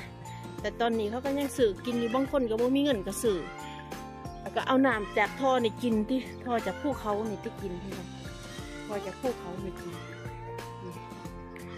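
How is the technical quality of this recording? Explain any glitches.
No glitches or faults are audible.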